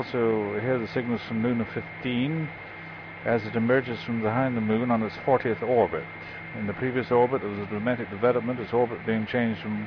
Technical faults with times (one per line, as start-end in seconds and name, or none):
none